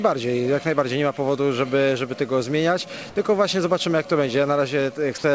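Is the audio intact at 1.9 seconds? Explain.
Yes, at 1.9 s the audio is intact and runs steadily through the WebRTC call path, whose G.722 coding leaves nothing above 8 kHz.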